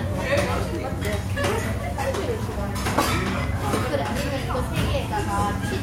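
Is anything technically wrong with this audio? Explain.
Yes. At 3.44 s a loud pop strikes, two quick pulses ending by 3.71 s, well above the sound, which continues beneath. A likely voltage step from a switch or plug, circuit-shaped, gives the thump; waveform shows two tall spikes, spectrogram two thin broadband vertical lines.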